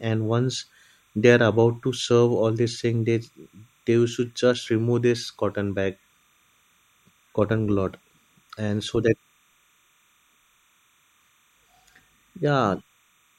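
Timecode bleed runs throughout the speech. A 30-frame linear timecode signal leaks in, switching near 1 kHz and 2 kHz. It makes a faint chirping warble, roughly 40 dB down.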